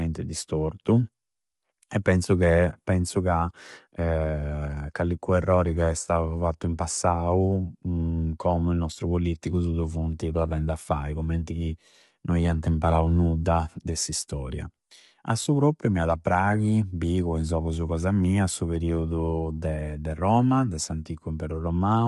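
From start to end, the speech passes through what is likely low-delay AAC compression, fitting a bitrate around 32 kbps. At this low bitrate the coding is coarse, so the sound is plainly rough and grainy, with noise between harmonics and nothing above 11.6 kHz.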